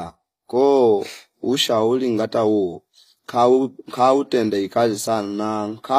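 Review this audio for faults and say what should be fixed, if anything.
The treble is gritty throughout, and s sounds come out metallic and lispy. Nothing is present above 14.9 kHz. This is likely HE-AAC compression at a low rate, around 24 kbps. The upper band is rebuilt from copied lower bands, so harmonics misalign. Encode at a higher bitrate or with plain AAC to keep the real treble.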